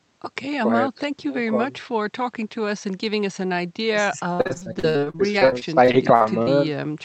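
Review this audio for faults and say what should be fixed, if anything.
From 4.33 s to 6.49 s the speech breaks into repeated packet loss, giving it a choppy, robotic sound. Roughly two dozen short holes, the longest about 58 ms, are each patched by stretching the preceding sound, so close to a third of that stretch is concealment. On a spectrogram, which tops out near 8 kHz as expected from the Opus call path, the harmonics smear into flat horizontal bands with abrupt dropouts. The waveform shows repeated, identical cycles and sudden cuts. Improving network stability or enlarging the jitter buffer would prevent it.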